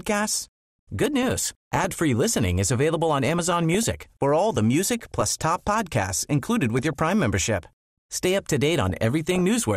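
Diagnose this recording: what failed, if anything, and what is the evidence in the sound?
Throughout, the speech sounds dull and granular, with a gurgling edge and upper frequencies that come and go. This points to the codec stage, likely MP2 compression at a low rate, consistent with roughly 80 kbps. Layer II divides the signal into 32 sub-bands and shares out bits among them. When bits run short, the top bands switch off intermittently and the remaining bands are coarsely quantised, which produces the flicker and grain heard here.

DAB burbling appears in five bursts, at 1.03–1.95 s, 3.29–3.91 s, 4.99–5.96 s, 6.78–7.13 s and 8.90–9.41 s. Each burst has short blips of noise laid over the speech, and the last one is the roughest. This is a reception and transmission fault. At a bit error rate of a fraction of a percent, errors get past the error correction and corrupt the MP2 audio data. 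Wrong samples then put short blips of noise into single sub-bands, over and over through each burst.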